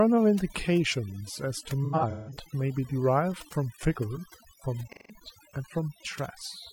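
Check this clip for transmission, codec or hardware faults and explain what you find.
Two faults are present in this speech: heavy noise reduction across the whole clip, and two dropouts from lost codec frames.

Overdone noise removal runs throughout. The denoiser cuts any frequency band near its noise estimate far down, taking quiet speech detail with it. The background drops and breaks up into twinkling specks.

AAC frame loss with concealment hits from 1.84 to 2.37 s and from 4.87 to 5.15 s. The decoder patches gaps from the last good spectrum. The first burst loses about 341 ms in patches across 512 ms, the longest run around 150 ms, heard as smeared, phasey stretches. The second loses about 171 ms, which points to four lost frames, and gives a shorter noisy smear.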